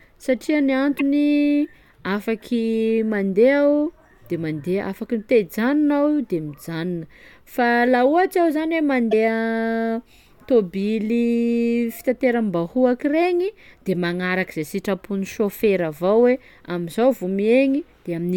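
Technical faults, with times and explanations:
0.98–1.01 s and 9.11–9.14 s, broken MP3 bit reservoir: each time the speech jumps abruptly forward and a garbled glitch of about 30 ms fills the join, a little over one 26.1 ms frame. The likely cause is frames missing from the MP3 stream. The next frame reaches back into the reservoir for data it had stored in earlier frames, finds bytes from the wrong frame, and decodes them as nonsense until the stream resynchronises.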